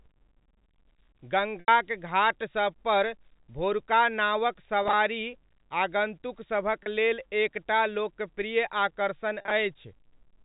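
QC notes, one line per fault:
1.60–1.68 s, 4.83–4.93 s, 6.83–6.86 s, 9.41–9.51 s: packet loss with pitch repetition. The receiver repeats the last pitch period over each 30–80 ms gap, giving a brief held, buzzy tone, while the 80 ms gap at 1.60 s fades into silence. The 4.83 s and 9.41 s losses are scattered runs across 100 ms. The gap lengths fit 10 ms packets.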